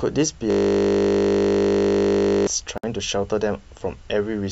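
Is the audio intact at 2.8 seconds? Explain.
No, there's a gap at a join of encoded pieces from 2.78 to 2.84 s, about 58 ms long. The speech was encoded in roughly 4-second chunks and stitched together untrimmed, so encoder start delay and end padding leave a hole with smeared edges before the speech picks up again.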